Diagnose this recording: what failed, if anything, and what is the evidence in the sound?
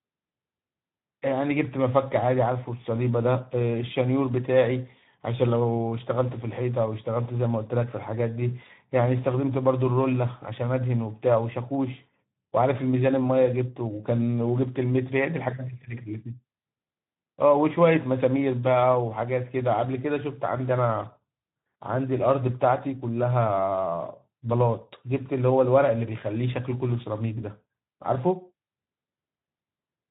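The codec stage failed: the speech carries Speex codec damage from start to finish, plainly audible as a hoarse, noisy quality, which fits a low Speex setting of around 11 kbps. CELP coding at that rate has too few bits to model the excitation, so the fine harmonic structure is replaced by coarse, buzzy approximations. On a spectrogram the band above 3.8 kHz is empty throughout, and the harmonics below it look smeared and grainy.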